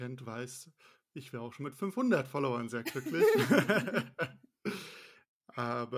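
No technical faults can be heard anywhere in the speech. There is no moment in the recording that needs a time marked against it.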